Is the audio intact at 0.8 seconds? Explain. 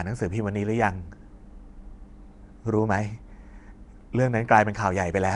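No, at 0.8 s the speech carries the same damage heard across the whole clip, which is likely Nellymoser compression, the old Flash microphone codec. It codes the sound in short blocks with very few bits, gives weak bands none at all and fills them with noise. That's why the speech has a rough, hissy halo and a smeared, underwater feel. Nothing comes through above about 10.6 kHz, and the level of damage points to a rate near 44 kbps.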